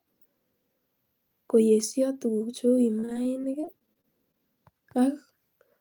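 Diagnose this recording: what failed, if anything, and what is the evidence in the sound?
From 2.99 to 4.40 s the speech turns choppy and robotic: repeated packet loss at the network stage, with about fifteen short gaps, up to 37 ms, each patched by extending the preceding sound.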